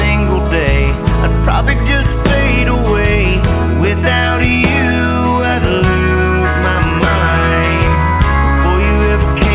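Nothing stood out on listening; the sound carries the narrow band of a phone-style call path, with nothing above about 4 kHz.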